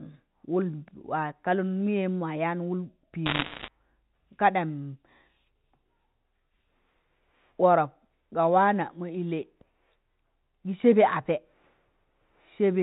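From 3.26 to 3.68 s the speech is peppered with sharp ticks and crackle, the sound of bit errors on a digital phone line, at a rate of roughly a few percent. Each flipped bit corrupts a single sample of the G.711 stream, and hits on the sign or upper bits give the loudest clicks. The speech between the ticks stays intact and band-limited below 4 kHz, which separates this from packet loss, where whole stretches drop out or smear.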